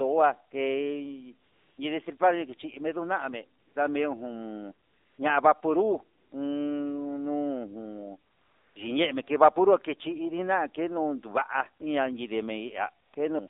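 A speech recording that sounds thin, buzzy and synthetic throughout, confined to roughly 250 Hz to 3.7 kHz. This is the AMR narrowband mobile codec at 7.4 kbps: the voice is rebuilt from a vocal-tract model excited by sparse pulses, so nothing above 4 kHz survives and low bitrate adds plain coding damage. The pauses switch abruptly to a smooth, steady hiss at 1.48–1.78 s, 2.18–2.20 s just after "kei ni", 3.60–3.76 s, 4.86–5.18 s just before "ña'a vapunrut", 6.18–6.32 s just after it, 8.32–8.76 s, 13.06–13.14 s and 13.48 s. That is AMR comfort noise: the phone judged those stretches silent and stopped sending speech frames, so the receiver substituted synthetic noise for the real background.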